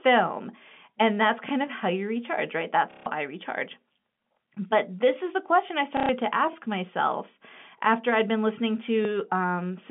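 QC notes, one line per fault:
1.49, 4.01, 6.53, 9.05 s: overlapping chunks. Each join replays about 20 ms of audio, so a brief click or stutter recurs every 2.5 s, showing the processing blocks were laid down overlapping instead of end to end.
2.91–3.06 s and 5.97–6.09 s: packet loss with last packet repeated. Gaps of 150 ms and 120 ms are filled by looping the last received packet. The loop ignores pitch, so the sound turns into a robotic buzz, which fits roughly 30 ms packets repeating at about 33 Hz.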